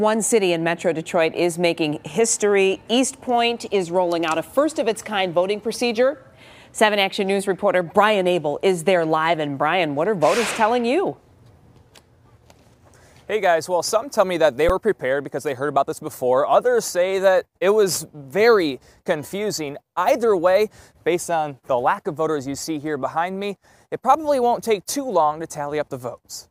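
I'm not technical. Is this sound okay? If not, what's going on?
No. At 14.69 s there is an underrun with held sample. The playback system briefly ran out of audio to send out, so for about 8 milliseconds the output froze at its last level instead of moving. That flat stretch makes the sound stop almost silently. A few thousandths of a second of audio were lost during the pause, so when sound resumed it jumped to a new point.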